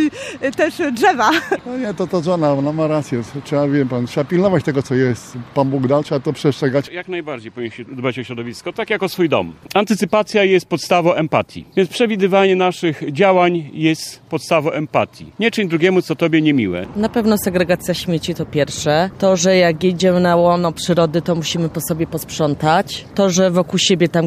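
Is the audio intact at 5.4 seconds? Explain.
Yes, the audio is intact at 5.4 seconds, with no fault to be heard at that moment.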